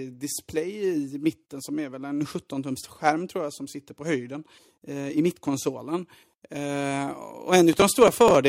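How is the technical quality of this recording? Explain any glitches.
The recording has one glitch near the end: processor overload crackle from 7.73 to 8.35 s. The processor missed several buffers of a few milliseconds each, and each miss replayed stale audio with hard edges. Over the speech this is heard as gritty tearing. Unlike a single dropout, it is a clustered burst that stops once the load passes.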